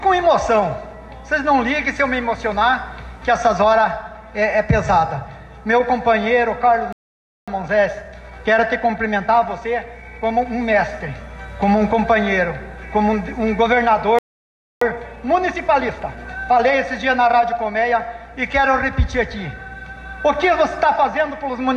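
At 6.93 s the player likely ran out of data or had its thread blocked, a playback stall: the audio stops mid-flow and stays silent for 0.55 s, until 7.48 s. To clear the backlog, a time-compressed catch-up follows from 7.48 to 10.48 s, trimming and cross-fading small pieces so the sound runs 1.1 times faster at unchanged pitch. The same pattern repeats with a 0.63 s stall from 14.19 to 14.81 s, then a 1.1-times catch-up until 17.81 s.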